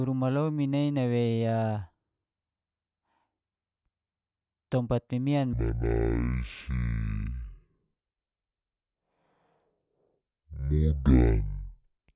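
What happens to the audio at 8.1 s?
At 8.1 s the speech is inside a wrong sample rate fault running from 5.53 s, just after "tompat mimian", to 12.15 s. Playback at half speed drops pitch a full octave, sounding slow and deep, which fits 16 kHz audio played at 8 kHz without conversion.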